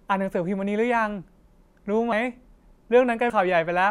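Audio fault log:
2.12 s and 3.30 s, compressed frames skipped: the sound lurches forward with a short smeared blip, not a sharp click, and a slice of audio simply goes missing, about 50 ms at the first point and about 100 ms at the second. Whole compressed frames of 26.1 ms each, around two and then around four, were absent or rejected by the decoder as damaged. Playback resumes further on, and the overlap between neighbouring frames softens each join into a blur.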